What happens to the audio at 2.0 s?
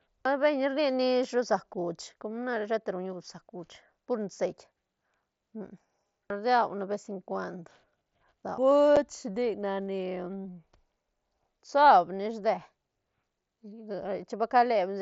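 Nothing goes wrong at 2.0 s: the speech carries straight through that moment without any dropout, click or other disturbance.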